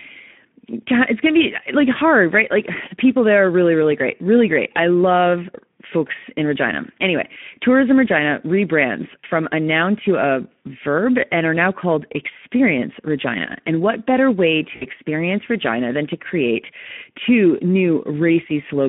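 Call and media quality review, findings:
Speex codec, throughout: hoarse, noisy speech in a 200 Hz to 3.4 kHz telephone band. Starved CELP excitation, consistent with about 11 kbps.

VoIP packet loss concealed by the speech codec, 9.20 to 9.26 s before "a noun to a" and 14.75 to 14.86 s after "what better way": decoder extrapolates the last pitch and filter into a fading smear, fitting lost 20 ms frames.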